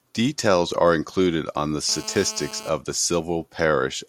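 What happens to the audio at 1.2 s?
Nothing goes wrong at 1.2 s; the speech runs on intact through that moment, with no dropout, click, distortion or other fault to be heard.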